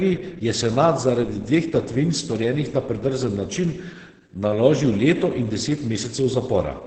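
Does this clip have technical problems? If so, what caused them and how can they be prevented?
Yes. Opus voice compression affects the whole speech clip: it sounds muffled, hoarse and slightly robotic. A spectrogram shows nothing above 8.7 kHz and blurred, coarsely coded harmonics, which fits Opus's SILK coder at roughly 10 kbps. Preventing it means encoding at a higher bitrate, ideally 24 kbps or more for speech.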